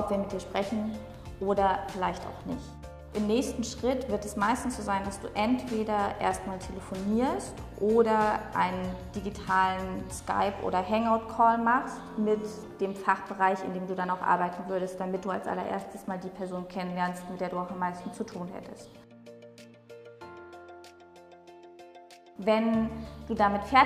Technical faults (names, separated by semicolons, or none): none